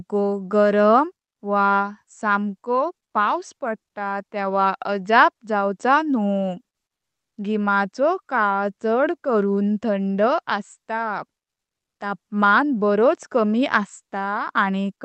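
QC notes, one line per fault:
6.95–7.35 s, comfort noise in place of the background: the sender likely stopped transmitting after "तेव्हा अजाब जावच न्हू", so smoother synthetic noise about 18 dB quieter replaces the real background until "घिमाचो काल चड करुन".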